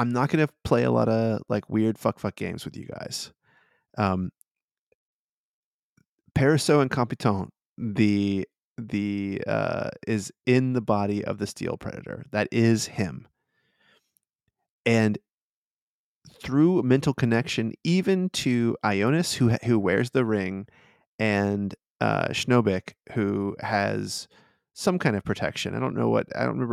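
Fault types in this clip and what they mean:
No technical fault can be heard anywhere in this speech recording. There is nothing here that calls for a line of its own.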